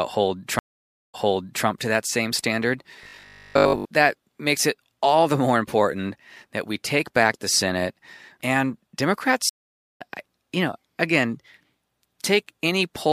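At 0.59 s the connection drops and the player has to reconnect with a fresh decoder. The result is a stream reconnect: about 0.52 s of silence, then playback resumes 0.55 s earlier than where it broke off. That overlap means the audio leading into "to that same standard" is heard twice, ending at 1.66 s.

From 3.03 to 3.85 s, between "to that same standard" and "that makes it all", new audio is likely reaching the output too slowly. The gaps are filled by looping 20 ms slices, so most of the real signal is skipped. The resulting robotic sound from repeated short buffers imposes a rigid, metallic 50 Hz buzz that only loosely tracks the speech.

At 9.49 s a second stream reconnect silences the audio for 0.48 s. Playback picks up about half a second later in the stream, just before "you know again" at 10.02 s, so that stretch of audio is lost.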